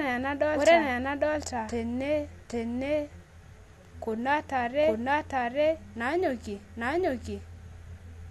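A second, slower capture path or an edit holding two out-of-step copies is the likely cause of the doubled audio track running throughout. A dry, full-band copy trails around 0.7 s behind at roughly equal loudness, so every spoken phrase sounds twice, with no room tail.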